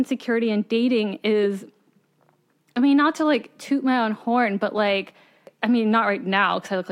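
Nothing in the speech stands out as a technical fault; it just runs along without any glitch calling attention to itself.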